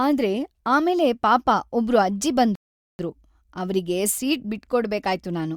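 At 2.55 s, just after "ಆಮೇಲೆ ಪಾಪ ಒಬ್ರು ಅಜ್ಜಿ", a rebuffering stall stops the speech dead: the player exhausted its downloaded audio and waited. Silence runs until 2.99 s, adding 0.44 s, then speech resumes exactly where it left off. The waveform shows a flat gap, and the spectrogram a blank vertical band.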